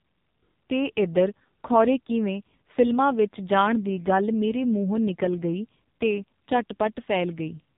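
From start to finish the speech carries heavy AMR narrowband mobile codec damage. Everything passes through a model of the vocal tract excited by a handful of pulses per short subframe, and the sparse excitation leaves the voice buzzy, thin and synthetic, which points to one of the lowest AMR-NB modes, around 5.9 kbps. On a spectrogram all energy stops abruptly at 4 kHz, consistent with 8 kHz sampling, leaving a blank band above.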